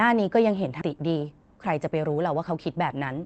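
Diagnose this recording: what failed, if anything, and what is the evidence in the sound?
At the network and jitter-buffer stage, a skip ahead occurred at 0.81 s. A stretch of queued speech, roughly 0.7 s of it, was dropped, and playback resumed from later audio that was already waiting. The sound jumps straight across the gap with no fill and no silence, so the two sides meet almost directly. The listener hears an abrupt splice where part of the utterance simply vanishes.

The jitter buffer then applied a speed-up from 0.94 s to 3.21 s. It was still holding more audio than its target and worked the excess down by repeatedly cutting out short pitch-period segments, removing about 0.3 s in total. Speech runs at 111% speed with pitch unchanged, so it sounds hurried. The call codec's limited bandwidth, audible as missing top end above 8 kHz, stays constant throughout.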